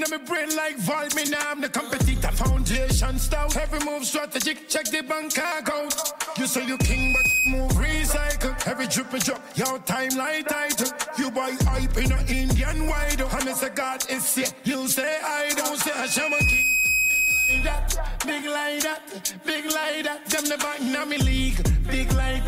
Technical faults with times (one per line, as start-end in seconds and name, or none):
6.68-7.58 loudspeaker feedback squeal
15.84-17.83 loudspeaker feedback squeal